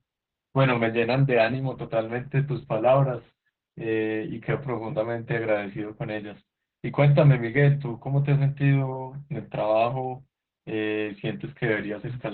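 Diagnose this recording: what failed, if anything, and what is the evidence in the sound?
The codec stage failed. The damage is Opus voice compression, and it runs through the whole speech clip. Nothing is heard above about 4 kHz, so the audio sounds muffled and boxed in. The speech is hoarse and slightly robotic. That points to narrowband SILK coding at a very low rate, around 8 kbps. At that rate the linear-prediction coder quantises the excitation too coarsely to rebuild natural voicing. The damage is heavy.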